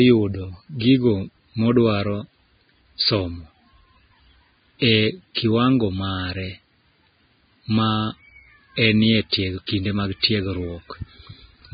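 Vorbis compression runs through the whole clip. The speech stops dead at about 4.9 kHz, and the treble below that edge sounds hissy and grainy. This is likely a very low Vorbis bitrate, around 16 kbps, where fine detail becomes matching noise.

Pre-echo appears at 9.67 s, between "enie tieg" and "kinde mag". A brief hiss, about 16 ms long, leads into a sharp onset that sounds softened. The codec spread its quantisation noise across a whole transform block, so noise sized for the attack also filled the quiet moment before it.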